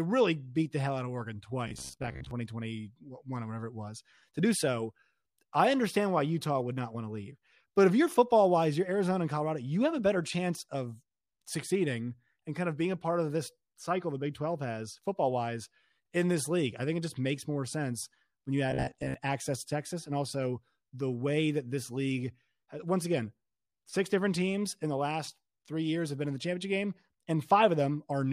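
From 1.68 to 2.31 s and again from 18.71 to 19.14 s the speech turns into a rigid, metallic 67 Hz buzz, robotic sound from repeated short buffers, likely from 15 ms chunks looping while the real audio is skipped: about half the first stretch and most of the second.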